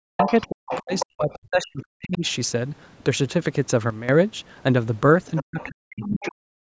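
From the very start to 0.27 s, and again from 0.49 to 2.24 s, the talker's speech sinks sharply, at its worst by something like 40 dB, with parts thinning or cutting out. This is speech suppressed in double talk: with both ends speaking at once, the echo canceller likely could not tell the local talker from the loudspeaker echo and turned everything down. Overlapping these dips, the other side's voice leaking through is audible from 0.22 to 0.48 s, only a few decibels under the talker, and from 0.67 to 1.06 s, somewhat quieter. It sounds like a second voice riding in the microphone signal, likely remote audio from the loudspeaker that the echo canceller failed to remove fully.

Between 3.90 and 4.09 s the level drops abruptly by about 12 dB, speech and background noise together, with no fade. This is a sudden gain jump, likely a digital gain change applied instantly rather than ramped.

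Near the end the pattern returns. A faint scrap of the other side's voice leaks through from 5.36 to 5.43 s. The talker is then suppressed in double talk from 5.43 to 6.57 s, again dipping deeply, by something like 40 dB. During that stretch the remote voice slips through twice more: very faintly from 5.60 to 5.69 s, and a little more clearly from 5.90 to 6.27 s.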